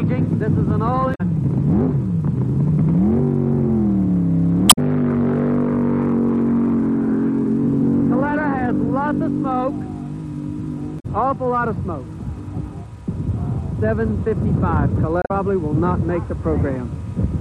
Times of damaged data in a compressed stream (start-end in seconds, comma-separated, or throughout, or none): 1.11-1.21, 4.66-4.78, 10.96-11.06, 15.19-15.31